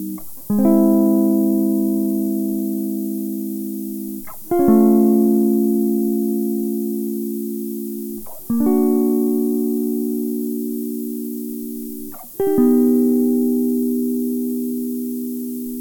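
From start to finish the music carries low bit depth with noise shaping: roughly 7 bits, with rounding error pushed upward into a thin, steady hiss about 15 dB below the music. Unlike plain truncation's grainy, level-dependent distortion, this hiss climbs sharply toward the treble.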